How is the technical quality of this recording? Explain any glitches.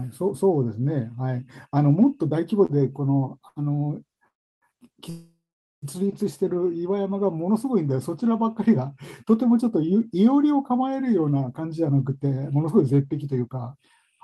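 The recording has network delivery faults: two brief stalls, two longer freezes and a stretch where the speech is hurried along.

Short stalls from a late packet occur at 2.65 to 2.72 s and 3.48 to 3.59 s. Each time a packet arrived late and the jitter buffer ran dry, so the receiver stretched the last sound for about 36 ms and then 75 ms before resuming at the same point. Nothing is lost, but a sound is held slightly too long with a faint buzz or dip. On a spectrogram the harmonics run flat and unchanging for that span, and the waveform shows a short repetitive section.

Call audio freezes occur at 4.28 to 4.65 s and 5.10 to 5.85 s, adding gaps of 338 ms and 725 ms. The likely cause is packets held up in transit, which left the buffer empty. The last sound carries on as a fading buzz or hiss and then drops to silence for about 320 ms and 450 ms before the speech resumes intact. A spectrogram shows a smeared, decaying band and then a blank column. 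The waveform tapers to a flat line.

A jitter buffer speed-up runs from 11.26 s to 14.17 s. The buffer held too much audio, so the receiver repeatedly trimmed pitch-period-sized slivers, removing about a third of a second in total. The speech plays at about 110% speed with unchanged pitch and sounds hurried. On a spectrogram, syllables and pauses appear compressed in time while the harmonic spacing stays the same.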